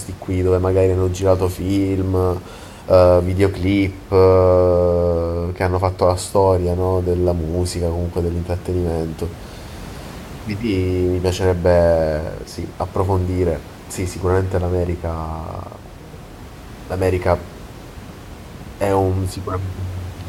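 No technical faults can be heard in this recording.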